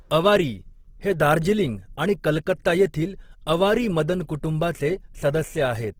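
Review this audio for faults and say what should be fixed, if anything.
The speech carries Opus compression damage throughout the clip. Voiced sounds come across rough and grainy, with a noisy, fizzing texture rather than MP3-style swirl, and the damage is plainly audible. The likely cause is Opus in its music (CELT) mode at a rate that fits about 16 kbps. With too few bits, bands are filled with folded or noise-like energy instead of being left empty. On a spectrogram the band stays full up to about 20.2 kHz with few holes, but harmonics look speckled and smeared rather than forming clean lines. The waveform envelope looks ordinary. To prevent this, encode at a noticeably higher Opus bitrate, or keep an uncompressed master and compress only once for delivery.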